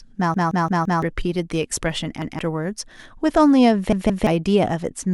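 Repeated buffer at 0.34–1.02 s, 2.22–2.39 s and 3.93–4.27 s in this speech clip: one 171 ms slice replays four, one and then two extra times with hard joins. Fresh audio arrived late, so the device replayed what fits an 8192-sample buffer, losing roughly 0.7, 0.15 and 0.3 s.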